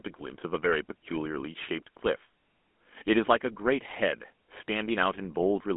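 Throughout, the speech carries the GSM full-rate codec: the band sits between roughly 200 Hz and 3.5 kHz, and the pulse-driven vocal-tract model leaves a plainly audible buzzy, gravelly roughness, a texture consistent with 13 kbps GSM coding.

From 3.91 to 3.94 s, GSM bit errors corrupt the decoded parameters for a short burst, about two frames' worth, as on a weak link. Damaged filter, pitch or gain values distort the spectrum, giving a brief squawking, gargled pop.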